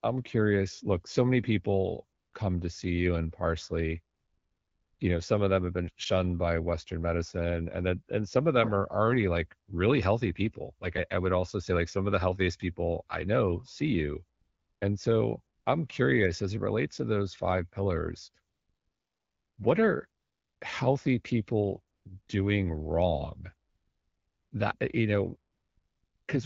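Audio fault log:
2.19 s to 26.27 s, AMR comfort noise: eleven gaps, 20 ms to about 1 s long, where voice activity detection stopped speech frames and the receiver substituted smooth synthetic noise. The real background switches to a steady hiss. The AMR-WB coding around them sounds clear, which fits a 12.65 kbit/s mode.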